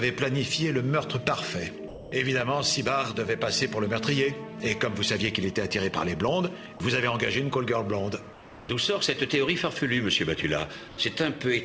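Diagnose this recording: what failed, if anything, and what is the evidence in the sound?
At 1.88 to 2.12 s, about 240 ms of the sound gives way to a steady, featureless hiss, with roughly 200 ms of actual signal missing before it resumes. The stage is call processing: this is likely sound dropped by the voice detector, which judged that stretch to be background and stopped sending, so the receiver substituted comfort noise. On a spectrogram the detailed energy ends abruptly and a flat, uniform noise band fills the gap until the signal returns.

Two pauses show comfort noise in place of the background. The first runs from 8.33 to 8.69 s, about 360 ms, sitting about 4 dB below the surrounding background. The second runs from 10.88 to 10.97 s, about 90 ms, and is only about 1 dB lower. In both, the real background, about 20 dB under the loudest passages, is swapped for smooth synthetic noise. 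The likely mechanism is discontinuous transmission: the sender went quiet and the receiver generated noise to fill the silence. On a spectrogram these patches look evenly textured and lack fine structure. In the waveform they appear as a constant-level band, slightly lower in the first patch. Everywhere, including in these patches, nothing appears above 8 kHz, which fits a G.722 call codec.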